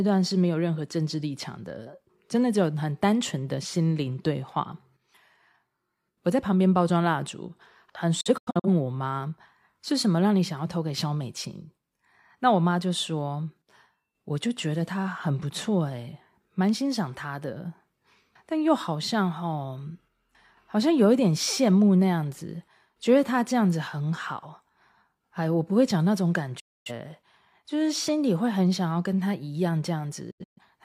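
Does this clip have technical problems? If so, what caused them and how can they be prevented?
Yes. The speech briefly cuts out three times, each cut fading in about 8 ms. From 8.21 to 8.68 s there is a broken patch of short holes, from 26.60 to 26.91 s a solid gap of about a quarter second, and from 30.31 to 30.62 s another scattered patch whose longest hole is 128 ms. This is a digital broadcast dropout: the receiver muted frames it could not decode, and the hole lengths point to frames of roughly 43 ms. A stronger signal or better antenna placement would prevent it.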